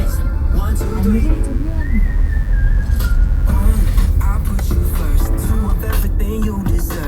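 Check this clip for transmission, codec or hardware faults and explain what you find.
One hardware fault is present: mains buzz, from 0.82 s to 3.88 s. An unshielded or switching power source injects sharp spikes twice per 50 Hz cycle, building harmonics into the kilohertz range. The result is a steady, raspy buzz roughly 35 dB beneath the sound.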